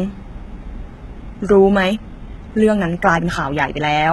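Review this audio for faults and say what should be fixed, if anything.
Throughout the clip the speech carries heavy codec damage that points to HE-AAC compression at a very low rate, likely around 16 kbps with the parametric stereo of HE-AAC v2. Nothing reaches above 11.8 kHz. The upper band is synthesised by copying lower bands upward under a coarse envelope rather than coded directly, so harmonics fail to line up across the crossover and sibilants come out gritty and metallic. The fix is to re-encode from the original source at a higher bitrate with plain AAC-LC, or to deliver it uncompressed.

From 1.79 s to the end, a time-stretched section is audible. The pace jumps abruptly to about 1.55 times normal speed while the pitch stays unchanged, which likely comes from software compressing the segment to fit a length by discarding short slices of audio. Those dropped slices make the speech sound rushed. 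The fix is to restore the unstretched take for that span, and to prevent it, edit timing by trimming pauses or recording to length rather than applying large speed changes.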